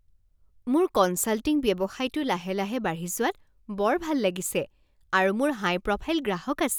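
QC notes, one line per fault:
No faults found in the speech.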